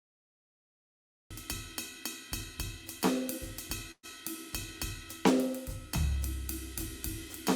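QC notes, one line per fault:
0.00–1.31 s cut-off start: flat digital silence, then the music begins mid-sound at 1.31 s with no attack; the waveform jumps from zero straight to full level.
3.91–4.06 s burst of packet loss: 120 ms of music is missing; the last sound is held and fades over 115 ms, with 40 ms of silence; the spectrogram shows smeared, decaying frames.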